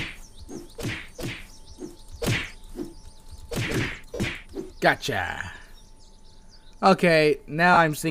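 Right from the top the audio is already carrying a doubled audio track. A second full-band copy trails the original by roughly a second and a half, sitting about 5 dB lower, with no reverb or decay to blend it in. It cuts off abruptly at 3.86 s. That points most likely to the signal being captured twice, with one path running slower than the other, so you hear a clean, dry echo of everything a beat and a half late.

Scattered through the clip are lost LE Audio frames. When LC3 frames go missing, the decoder fills the gap by reusing the last spectrum with scrambled signs, so tonal content briefly turns into a noisy smear. Short dropouts land at 0.52 to 0.56 s (30 ms), 2.39 to 2.41 s (15 ms), and 7.74 to 7.77 s (30 ms). The worst patch is at 4.14 to 4.27 s, where about 80 ms of loss is spread over 120 ms, with the longest run around 50 ms, so the smear there starts to fade rather than just flicker. 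The light lossy compression on top doesn't hide any of this.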